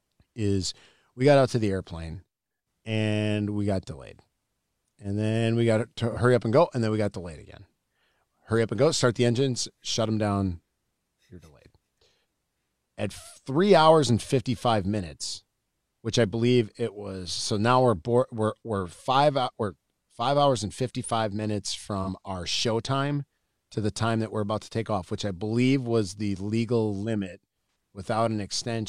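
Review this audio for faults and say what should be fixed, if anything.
AAC frame loss with concealment at 6.11 s and 22.02 s (about 43 ms each, fitting one lost frame) and at 27.67 s (about 85 ms, fitting two). The decoder refilled each gap from the previous spectrum, giving a brief smeared, phasey patch rather than the hard silence of a dropout. Protect the transport stream with error correction or retransmission.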